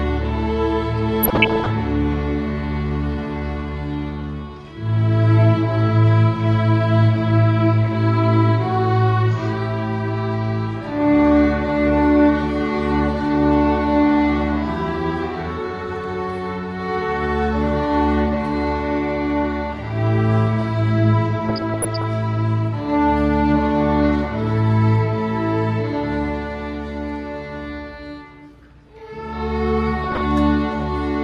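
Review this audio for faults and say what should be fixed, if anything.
Burbling breaks over the sound at 1.23–1.71 s, 21.49–22.04 s and 30.01–30.24 s. This is DAB burbling: bit errors, under one percent, slip past error correction into the MP2 data, putting short blips of noise in single sub-bands. Stronger reception prevents it.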